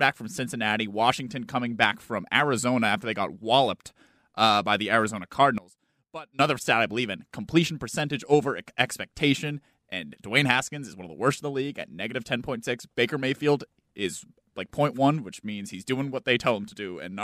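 From 5.58 to 6.39 s the speech suddenly drops by about 19 dB and nearly vanishes, then comes straight back. That's likely one channel inverted: with one side's polarity flipped, the centred voice cancels when the two are summed to mono, leaving only their faint difference.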